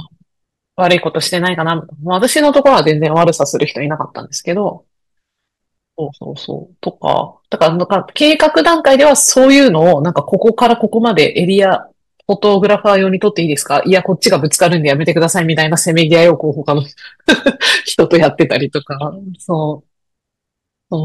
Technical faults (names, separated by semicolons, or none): hard clipping